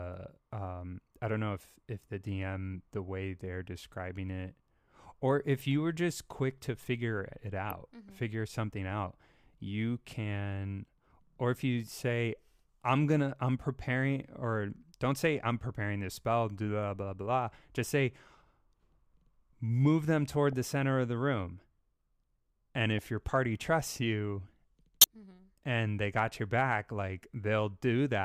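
At 7.67 to 7.72 s, just after "quick to figure it", a corrupt frame decoded smears misplaced energy across roughly five frames as a quiet chirp. Further single damaged frames give brief blips at 20.53 s, between "move them toward" and "the center of the", and at 22.98 s, both faint, around -30 to -25 dBFS. The loudest, near -10 dBFS, follows "your party trusts you" at 25.01 to 25.04 s. Flipped bits made the decoder apply wrong gains or misread codes, so each shows as a short vertical streak on a spectrogram and a spike on the waveform.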